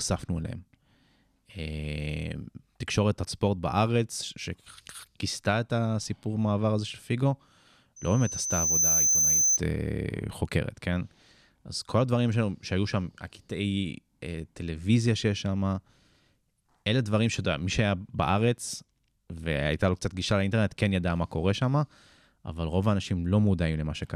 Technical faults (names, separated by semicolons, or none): loudspeaker feedback squeal